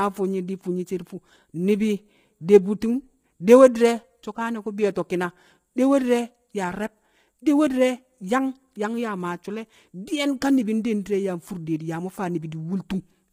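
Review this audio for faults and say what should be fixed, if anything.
Low-delay AAC compression damage runs through the whole speech clip. The voice sounds rough and grainy. Noise fills the gaps between pitch harmonics. The top band sounds thin and partly synthetic. The likely cause is the AAC-ELD coder used for video calls. Its short frames, around 10 ms, blur the harmonics. The heavy damage fits a low rate near 24 kbps. Too few bits remain for clean detail. To prevent this, record or send at a higher bitrate, or use a codec with longer frames when low delay isn't needed.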